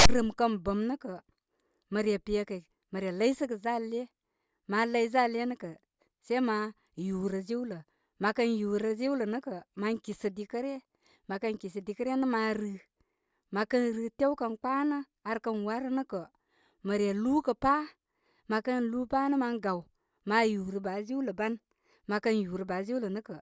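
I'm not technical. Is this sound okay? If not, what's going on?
No. At the very start, from 0.0 to 0.09 s, there is a short, harsh burst of static with hard edges before the speech begins. This is file tags played as audio: the player read the file's text labels, plus some blank padding, as sound.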